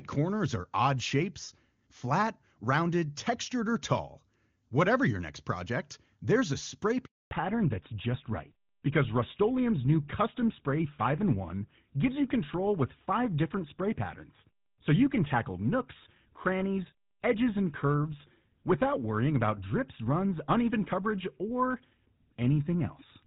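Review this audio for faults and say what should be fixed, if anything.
A handover gap opens at 7.05 s and lasts 260 ms, to 7.31 s. While the call was passed from one network to another, no speech frames reached the receiver, so the speech fades out within a few tens of milliseconds and stays silent until the new link delivers audio. On a waveform this is a flat stretch of near-zero amplitude. On a spectrogram it is a blank vertical band across all frequencies. Preventing it means tuning handover so the new link is established before the old one is released, with jitter-buffer concealment filling any residual gap.

Fallback to narrowband follows immediately, from 7.31 s to the end. Before the gap, the speech has the wide, clean top end of AMR wideband (HD Voice), with faint or no codec damage, which fits its highest bitrate. After the gap, nothing above 4 kHz survives, and the speech turns dull and rougher, consistent with a drop to an older GSM-era full-rate codec. 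A spectrogram shows energy reaching about 7 kHz before 7.31 s, then a hard ceiling at 4 kHz, with empty space above it. Preventing it means ensuring both networks support wideband codecs so the call renegotiates AMR-WB after handover.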